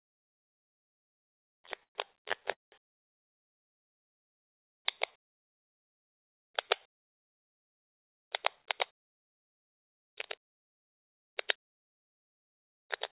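From 1.2 to 2.51 s the sound breaks into repeated stalls (stutter): eighteen short hold-ups in a row, where the receiver kept extending the last fragment because packets were arriving late. About 350 ms of filler is spread across the stretch, roughly 27% of it, with the longest gap 118 ms. Nothing drops out, so the sound drags and stammers. Unlike a single freeze, these are many brief, uneven catches with the sound resuming between them.

Right after, from 2.51 to 2.74 s, comes a call audio freeze, likely caused by a packet hold-up that emptied the jitter buffer completely. Instead of a stammer there is one continuous interruption: the last sound is stretched into a brief fading buzz, then about 180 ms of silence, 211 ms in all, before the audio picks up exactly where it stopped. What distinguishes it from the preceding stutter is that single long gap that decays to silence, rather than a string of short repeats.

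From 4.75 to 6.89 s a jitter buffer slow-down draws the audio out. The receiver rebuilt its reserve by repeating single pitch periods and bits of pauses many times over, adding 144 ms and running the sound at about 93% speed. Pitch stays the same, which separates this from a tape-style slowdown: events simply last longer and sustained parts smear slightly, but there are no gaps or fades.

From 8.56 s nearly to the end, at 13.1 s, the opposite happens. A jitter buffer speed-up trims tiny slices of one or a few pitch periods over and over to cut excess delay, removing around 200 ms in total. The sound plays at about 105% speed at unchanged pitch, so it feels slightly hurried and events come marginally early. Unlike the slow-down it shortens rather than stretches, and unlike the stalls it never pauses. All of this sits on a band-limited call path with nothing above 4 kHz, which fits G.711 mu-law at 64 kbps.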